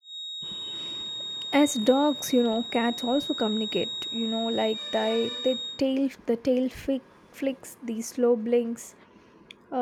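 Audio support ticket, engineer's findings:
Feedback whistle, 0.0–5.84 s, stops just before "the tail flick flicks". Thin steady tone at 3.8 kHz, roughly 10 dB under the speech, swelling and fading slowly. Likely speaker-to-mic loop held at the edge of feedback, one frequency sustaining without runaway.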